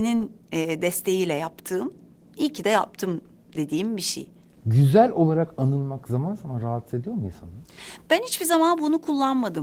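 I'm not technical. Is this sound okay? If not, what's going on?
Yes, nothing stood out when listening to this speech recording.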